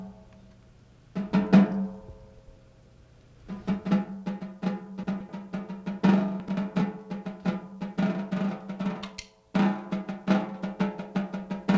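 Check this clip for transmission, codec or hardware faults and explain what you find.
There are three moments of chunks out of order, at 2.39 to 2.56 s, 5.04 to 5.29 s and 6.40 to 6.57 s, heard through a call path whose band stops at 8 kHz.

Chunks out of order: segments of about 85 ms play one chunk late at 2.39 s and 6.40 s, and two chunks late at 5.04 s. Nothing is lost, but the sound briefly jumbles. The waveform shows abrupt joins.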